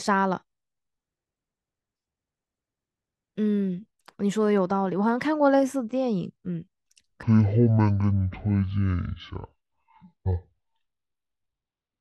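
From 7.23 s right through to 12.01 s, the speech drops to half speed and a full octave lower. That's stereo read as mono: the interleaved left and right samples get played one after another as a single channel, doubling everything's length.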